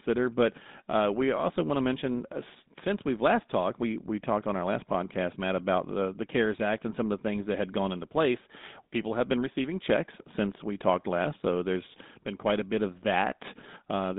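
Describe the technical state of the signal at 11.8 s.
Buzzy, gravelly roughness with nothing above 3.8 kHz, present throughout: GSM full-rate codec damage, pulse-driven vocal-tract coding consistent with a 13 kbps stream.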